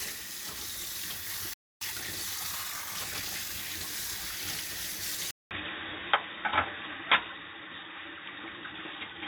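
At 1.53 s the sound cuts out mid-flow and stays silent until 1.81 s, a gap of about 0.28 s, before picking up where it left off. This is a playback stall. The likely cause is that the player ran short of buffered data, or its audio thread was held up, so nothing reached the output until it recovered.

From 1.81 s to 3.63 s the audio runs hurried, at about 1.15 times normal speed, yet its pitch stays where it should. This is time-compressed catch-up. Having fallen behind during the stall, the player trims its backlog by dropping small slices of audio and cross-fading across the joins. That is why the rate rises without any shift in pitch.

At 5.31 s there is a brief silence of about 0.2 s, and from then until the end the sound is duller and boxier. A new background noise sits roughly 40 dB below the sound. The overall level stays about the same. This is an input switched to a poorer device, likely a change to another microphone or a headset's call profile with a narrower band.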